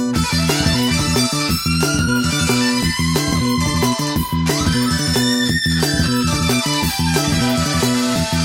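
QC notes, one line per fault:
Throughout, audio read two samples at a time (double speed): it's running twice as fast and a full octave up, because pairs of samples are being taken as one frame, likely from a channel-count or sample-width mismatch.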